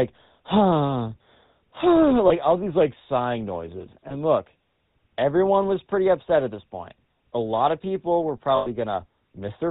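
The whole clip carries the sound of the GSM full-rate codec. This speech has been squeezed to a rate that points to 13 kbit/s. The codec models the vocal tract and excites it with a sparse train of regular pulses. Nothing above 4 kHz gets through. The result is plainly audible. Voices take on a buzzy, gravelly edge, harshest on higher voices.

Lost GSM frames break in three times. The first runs from 2.28 to 2.31 s. The second runs from 4.08 to 4.12 s. Each is a gap of about 20 ms, which fits a single missing frame. The decoder fills the hole by repeating the settings of the last good frame. Each brief gap becomes a short metallic roughness. The third loss, from 8.56 to 8.67 s, lasts about 100 ms, about five frames. That held frame rings longer.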